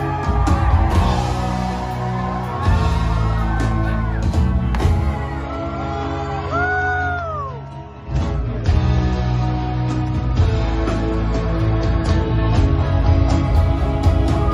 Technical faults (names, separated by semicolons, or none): adaptive stream at a lower bitrate